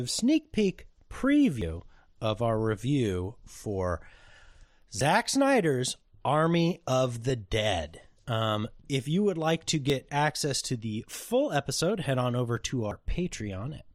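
Damaged data in a compressed stream at 1.62, 5.01, 8.78 to 8.82 and 12.91 s: corrupted frames knock the decoder out of sync while it hunts for the next header, leaving brief blips in the speech.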